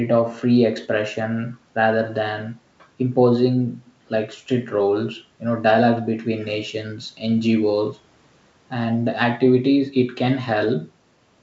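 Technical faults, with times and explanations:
No technical faults are heard in this clip, so there are no times or explanations to give.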